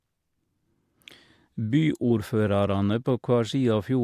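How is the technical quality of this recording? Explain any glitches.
No glitches turn up here, so there's nothing to untangle in this recording.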